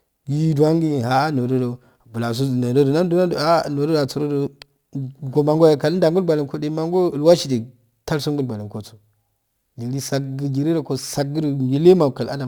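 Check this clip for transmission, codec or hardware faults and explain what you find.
There's one fault, running through the whole clip: crude rate conversion. The speech has a gritty, inharmonic fizz riding under it, strongest on loud and bright sounds. That fits a 48 kHz to 44.1 kHz change done by simply dropping or repeating samples without filtering. The resulting error, roughly 30 dB below the speech, forms shifted, inharmonic copies of the voice.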